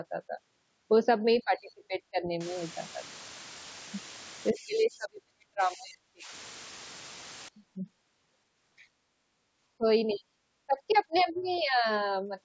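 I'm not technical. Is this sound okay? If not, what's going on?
No. In several places the call's echo canceller likely got confused while both people talked at once. It turned the speaker down along with the echo, causing speech suppressed in double talk. The voice dips or drops out from 1.44 to 2.25 s, 4.52 to 6.31 s, 9.78 to 9.85 s, 10.13 to 10.35 s and 10.66 to 11.87 s.

From 2.41 to 7.48 s the audio was stored with very few levels of loudness, which points to only about five bits, and smoothing noise was added. This low bit depth with dither sounds like a steady, even hiss over the speech, without crackly distortion.

The echo canceller also likely failed to remove all of the other person's voice playing from the loudspeaker. Faint scraps of the other side's voice leak through at 10.09 to 10.15 s, 11.17 to 11.23 s and 11.39 to 11.62 s, quiet.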